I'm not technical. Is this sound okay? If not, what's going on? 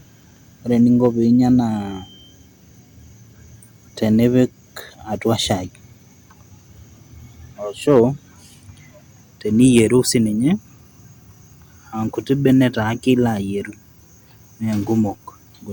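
No. There is hard clipping in three places. Right after "ore eninko", at 1.05 to 1.07 s. Again at 7.90 to 8.04 s. Then at 9.63 to 9.81 s, just before "sii ninye". The loudest moments were too big for the recording to hold, so their tops got sliced flat. You hear that as brief crackly roughness.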